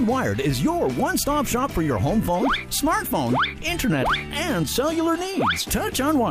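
No technical faults can be heard anywhere in the signal; it stays steady and intact across its whole duration.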